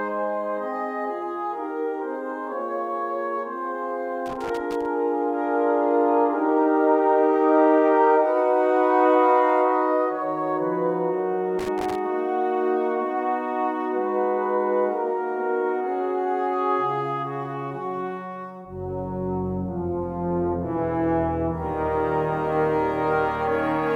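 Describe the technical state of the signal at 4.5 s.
At 4.5 s you're right in the middle of a burst of loose connector crackle, running from about 4.26 to 4.86 s. A worn or dirty contact is making and breaking as it shifts, chopping the signal into an irregular, scratchy crackle for a little over half a second.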